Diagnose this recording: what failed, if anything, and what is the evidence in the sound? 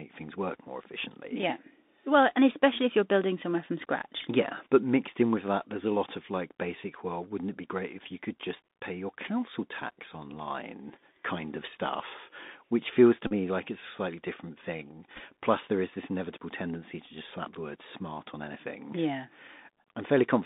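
Speech sounds narrow and scratchy throughout, band-limited to roughly 200 Hz to 3.7 kHz, with a granular hiss beneath it and rough s sounds. This is the Bluetooth CVSD headset codec at the codec stage. Its one-bit delta modulation adapts its step too slowly for loud high content, which fits a 64 kbps headset link.

At 13.27 to 13.32 s there is a brief buzz near 267 Hz, and at 15.15 to 15.20 s a rougher, broken burst of ticks. Both come from Bluetooth headset packets being repeated over the wireless link. Lost 3.75 ms packets were replaced by re-decoding the last good one. The first event loses about 37.5 ms, consistent with roughly ten repeats in a row. The second spreads 22.5 ms of loss over 45 ms, in runs of only a few milliseconds each.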